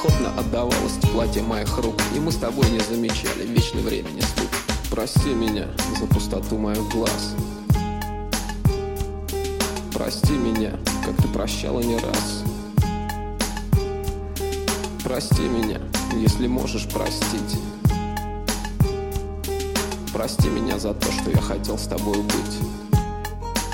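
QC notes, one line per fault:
No faults heard anywhere in the clip.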